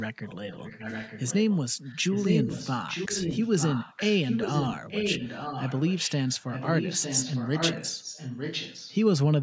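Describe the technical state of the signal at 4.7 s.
At 4.7 s you're right in the middle of an echo leak running from 1.84 to 8.96 s: a copy of the speech comes back about 906 ms late and only a bit quieter than the original, likely a far-end speakerphone whose echo canceller let its own pickup slip through.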